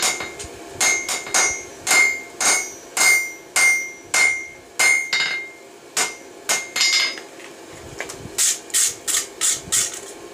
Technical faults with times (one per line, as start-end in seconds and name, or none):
0.00-3.18 doubled audio track